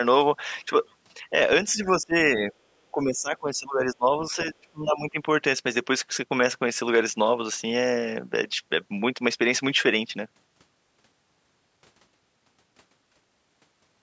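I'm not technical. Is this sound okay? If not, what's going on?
No. The speech drops away three times: from 1.74 to 2.15 s, again briefly from 2.36 to 2.54 s, and most noticeably from 2.91 to 5.18 s, where it sinks well down in bursts. This is speech suppressed in double talk. It likely happened because both people spoke at once, and the call's echo cancelling mistook this talker for returning echo and turned them down along with it.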